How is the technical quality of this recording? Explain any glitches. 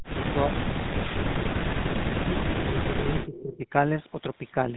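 The recording has two faults: plainly audible codec coloration throughout and a brief echo near the end.

GSM full-rate codec, throughout: The speech is encoded by modelling the vocal tract and exciting it with sparse, regularly spaced pulses, which fits the 13 kbps full-rate scheme. The result is a plainly audible buzzy, gravelly roughness. On a spectrogram, everything stops abruptly at about 3.9 kHz, with a blank band above.

Echo leak, 3.21 to 3.57 s: A faint delayed copy of the speech, trailing by 332 ms and well below the main level, slips through. The likely cause is a loudspeaker echo canceller that failed to remove everything. A spectrogram shows a weaker copy of the formant traces offset in time.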